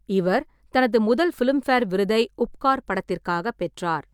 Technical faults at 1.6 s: none

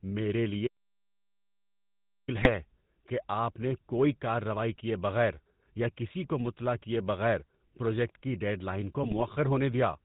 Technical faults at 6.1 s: GSM full-rate codec

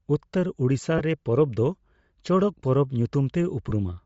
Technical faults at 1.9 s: Bluetooth LC3 compression

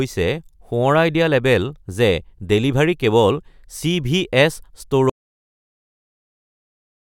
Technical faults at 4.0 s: none

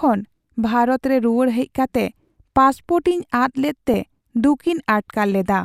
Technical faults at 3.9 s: DAB burbling

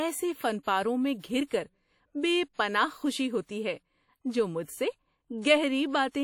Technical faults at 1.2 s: WMA compression; pre-echo

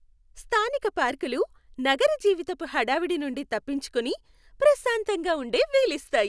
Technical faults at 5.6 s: none

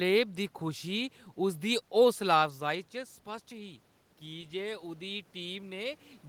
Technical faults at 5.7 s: automatic gain rising

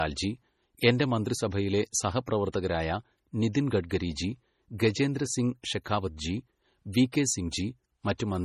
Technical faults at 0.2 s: low-bitrate audio saved at a high bitrate

